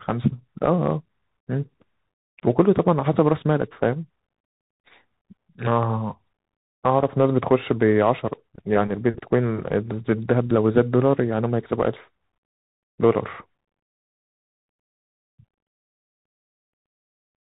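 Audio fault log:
Throughout: Bluetooth CVSD headset codec. Nothing above 4 kHz. Its one-bit slope tracking makes s sounds scratchy under granular hiss, which fits a 64 kbps link.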